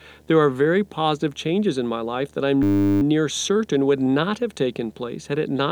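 Throughout, a video or display buzz sits roughly 35 dB under the speech: a 75 Hz field-rate hum with hash above it, coupled in from a screen or video cable. From 2.63 to 3.02 s, between "my life that I'm" and "near certain would not", a system hang loop repeats one 10 ms buffer dozens of times, producing a steady 100 Hz buzz, with almost no speech lost.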